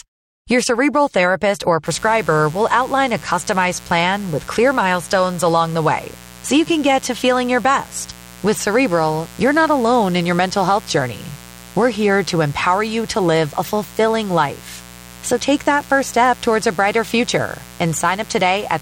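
A speech clip with a mains buzz that comes in at 1.86 s, right after "cerebral therapist or", and runs to the end. It's a steady, raspy buzz built on 60 Hz, sitting roughly 20 dB below the speech. That edgy texture comes from sharp switching spikes, twice per mains cycle, from something like a dimmer, a rectifier or an unshielded run. They spread harmonics of 60 Hz well up into the kilohertz range.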